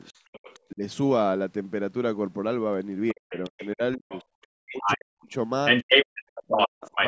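From 0.04 to 0.6 s a faint second voice sits well below the talker: the other side's voice leaking through, likely because the echo canceller left part of the loudspeaker signal in the microphone. Then at 0.72 to 0.82 s the talker briefly dips by a moderate amount, speech suppressed in double talk. The same leak returns at 3.08 to 3.68 s, overlapping a near-total cut of the talker from 3.13 to 4.13 s. The leak grows to about the talker's level at 4.09 to 4.98 s, the talker drops out again at 4.67 to 5.35 s, and from 5.66 s to the end the leaked voice is slightly louder than the talker, who is suppressed between 5.82 and 6.86 s. Both kinds overlap, but the leak adds a second voice, while suppression takes level away from the talker. Unlike a network dropout, the dips likely fall where the two sides talk at once. The call microphone processing is also present and working normally, with nothing above 8 kHz.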